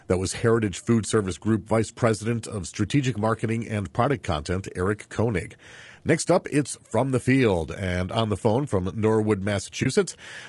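Throughout the clip the speech sounds rough and grainy. Noise fills the gaps between harmonics, and the top band is thin. This is likely low-delay AAC compression, AAC-ELD as used in video calls. Its short frames resolve pitch poorly. The damage fits a bitrate near 32 kbps.

From 9.83 to 9.86 s there is AAC frame loss with muting. The decoder zeroed the missing spectrum. Overlapping windows fade the sound out and back in. The result is a brief dip, which fits one lost frame of about 20 ms.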